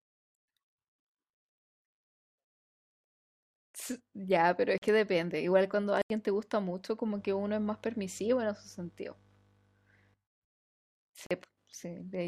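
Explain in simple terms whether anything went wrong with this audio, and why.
Three short dropouts are audible: brief holes at 4.78 to 4.82 s, 6.02 to 6.10 s, and 11.26 to 11.31 s. Each is a block of digital silence, where chunks of sound were replaced by zeros, most likely because the program didn't deliver audio in time.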